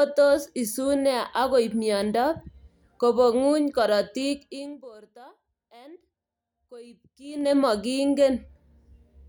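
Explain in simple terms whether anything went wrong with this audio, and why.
Yes, something went wrong: the volume control moved in small jumps instead of gliding, a fault called zipper noise. Between 4.31 and 4.91 seconds the speech is turned down a long way, and between 7.16 and 7.55 seconds it is turned back up, each time in dozens of tiny steps per second. Every jump leaves a small click, so while the level moves you hear a quick ticking or zipping laid over the speech.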